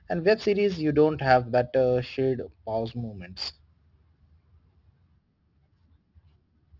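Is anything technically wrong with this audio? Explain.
Yes. Aliasing runs through the whole clip: the speech was resampled downward without an anti-alias filter, so energy above 6 kHz folded back below it, which fits a drop to 12 kHz. Sibilants turn gritty and metallic, with the folded tones sitting roughly 25 dB below the speech.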